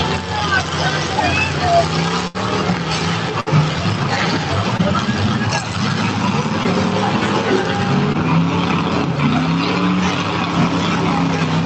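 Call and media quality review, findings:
Burst of packet loss at 2.27–2.36 s and 3.40–3.60 s. Receiver-side concealment extends the last sound for 70 ms and 60 ms, decaying, then playback resumes with about 60 ms of audio skipped each time. Probable network jitter or loss in consecutive packets.

Short concealed packet loss at 4.77, 6.63 and 8.12 s. Brief smear or wobble of 14–20 ms where the decoder extrapolates the preceding sound and crossfades back in. About 20 ms missing per event, which points to single-frame loss in transport.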